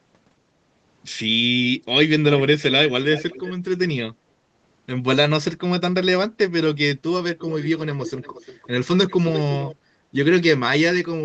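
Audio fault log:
3.15–3.53 s, 7.39–7.69 s, 8.06–8.68 s, 9.08–9.42 s and 9.61–9.75 s: echo leak. A faint, delayed copy of the speech comes back in short scraps. It trails the speech by 368 ms in the first scrap and by 349 ms in the rest. It sits well below the direct speech. It is loudest around 9.1 s and faintest around 8.1 s. The likely cause is a far-end loudspeaker whose echo canceller let part of its microphone pickup through and sent it back.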